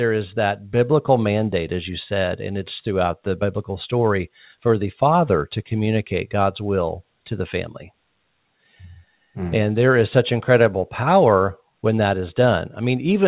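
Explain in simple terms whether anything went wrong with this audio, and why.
Nothing went wrong here: the speech just came through an ordinary phone-style call line, which is why there's nothing above 4 kHz, and that's simply how such calls normally come across.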